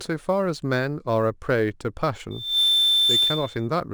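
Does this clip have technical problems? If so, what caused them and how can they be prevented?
Yes. Sample clock jitter runs throughout. An unsteady converter clock, wobbling by a few microseconds, mistimes samples. That adds a rough hiss on loud, bright speech. Prevent it with a stable, low-jitter clock source.

Loudspeaker feedback squeal appears from 2.30 to 3.68 s. The microphone re-captures its own loudspeaker. A 3.6 kHz tone builds within about a third of a second and ends louder than the speech. Prevent it by moving the microphone away from the speaker, lowering gain, or notching 3.6 kHz.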